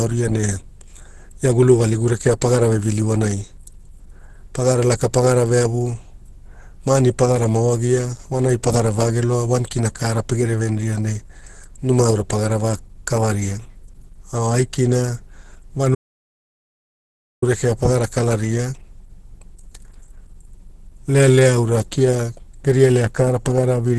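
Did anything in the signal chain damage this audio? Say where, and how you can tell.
Yes. At the codec stage, throughout the clip, the speech is hoarse, grainy and somewhat muffled, and nothing reaches above 12.2 kHz. This is likely Opus compression under heavy strain, running in its hybrid speech mode, which fits a rate around 12 kbps. Unlike MP3 damage, there is less swirling or watery hollowness, because the encoder fills starved bands with noise rather than leaving gaps. The result is roughness instead of chirps.

There is also an audio dropout to silence from 15.95 to 17.42 s, losing about 1.47 s, and the speech resumes just before "rekea pagara". The gap is silent with no room tone, and the sound cuts out and returns mid-flow. That fits an input that was lost upstream, through a disconnect or a failed link, while the recorder kept writing silence. A noise gate would fade in and out, and packet-loss concealment would fill the gap with smeared sound, but this is a hard cut on both edges.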